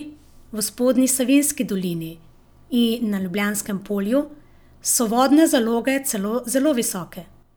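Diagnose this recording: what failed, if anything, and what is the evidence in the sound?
Nothing failed; no faults heard.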